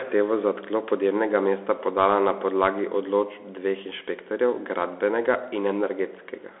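Speech heard through a Bluetooth CVSD headset codec for its whole length: the band sits at roughly 300 Hz to 3.5 kHz with nothing above 3.8 kHz, consistent with a 64 kbps CVSD stream. Plain telephone band-limiting is clean, but here the one-bit slope tracking leaves plainly audible granular hiss and scratchy s sounds.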